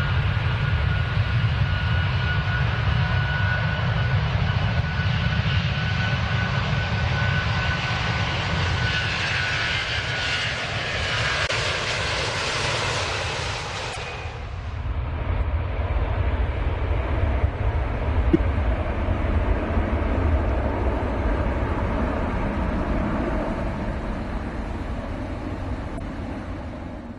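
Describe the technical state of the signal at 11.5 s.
At 11.46 to 11.51 s there is damaged data in a compressed stream: corrupted bytes make the decoder misread frames and lose sync, giving a brief chirp or blip. A spectrogram shows a narrow vertical smear; the waveform shows an abrupt discontinuity.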